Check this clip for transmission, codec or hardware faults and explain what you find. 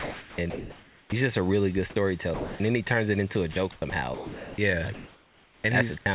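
The faults here are all of one family: the sender's voice activity detection and discontinuous transmission, heard through a narrowband G.711 call path with nothing above 4 kHz.

Sound chopped by the voice detector, 0.00–1.12 s (before "just a really good") and 3.52–4.58 s (after "turns it into a"). The detector likely toggled repeatedly, so stretches totalling about 1 s and 0.6 s became comfort noise. The audio stutters, with two or more holes in each stretch.

Sound dropped by the voice detector, 2.34–2.60 s (between "just a really good" and "then he turns it") and 5.98–6.06 s. Quiet material was likely classed as background and not sent, losing about 210 ms and 60 ms. The sound gives way to steady noise or near silence and then returns.

Comfort noise in place of the background, 4.94–5.64 s. Transmission likely paused during a gap, and the receiver generated noise matched roughly to the room background, which sits about 32 dB below the loud parts. 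The result is featureless hiss, about 1 dB quieter than the real background.

Onset clipped by the voice detector, 5.62–5.64 s. The detector was likely slow to reopen when sound resumed, so the first 20 ms were replaced by comfort noise. The onset arrives abruptly, without its soft start.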